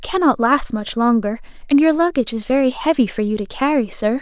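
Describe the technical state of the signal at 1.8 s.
At 1.8 s the speech signal is intact, with no audible dropout, distortion, glitch or other technical fault at that point.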